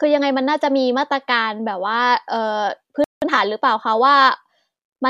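At 3.04 s the speech stops dead for about 179 ms, until 3.22 s. This is a playback stall. The player most likely ran out of buffered data or had its thread blocked. The output simply falls silent mid-flow, then picks up again.

From 3.22 to 3.38 s comes time-compressed catch-up. The player trims its backlog by cutting small slices and cross-fading the joins. The speech runs at twice normal speed but keeps its pitch. It sounds hurried.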